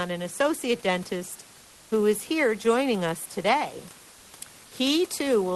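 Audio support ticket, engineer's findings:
Comfort noise in place of the background, 1.61–1.91 s, after "an associate dentist", before "who is here joining". Likely Opus DTX: sender halts transmission without speech, receiver synthesises noise. Real background, about 30 dB down, becomes flat featureless noise for 0.3 s, about 1 dB quieter.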